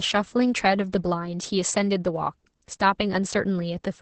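Opus voice compression runs throughout: the speech sounds muffled, hoarse and robotic, consistent with about 10 kb/s, and the spectrogram shows a sharp cutoff at 8 kHz with smeared harmonics.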